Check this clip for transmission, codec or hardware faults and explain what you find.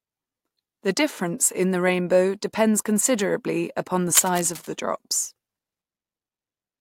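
One fault is present: cable scratch noise. It runs from 4.15 to 4.69 s, right after "depends considerably upon the". A worn cable or connector was likely moved, making its contact resistance jump about. That adds dense, uneven noise bursts, heard as scratching roughly 10 dB below the speech.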